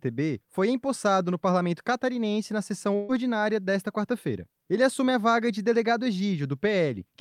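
A burst of packet loss runs from 2.95 to 3.12 s. Several consecutive packets never arrived in time, so the receiver covered about 134 ms by extending the last sound it had and fading it down, which gives a held, dwindling tone or hiss rather than silence. When real audio returns, about 60 ms of the original is gone, and playback sits about 74 ms later than before.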